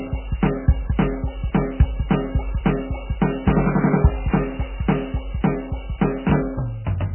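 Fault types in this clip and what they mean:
MP3 compression: the music sounds watery and swirling, with smeared attacks and nothing above 3 kHz, likely from heavy MP3 coding at a very low bitrate. A spectrogram shows a hard ceiling at 3 kHz and speckled, flickering patches where weak frequency lines drop out frame to frame.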